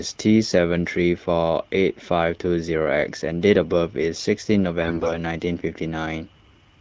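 Speech coded with AMR wideband (HD Voice), with a burst of AMR bit errors from 4.82 to 5.13 s. Flipped low-protection bits misplace excitation pulses and skew pitch, gain and spectral values, so the sound turns hoarse and gargly. The 0.31 s span fits about fourteen corrupted frames.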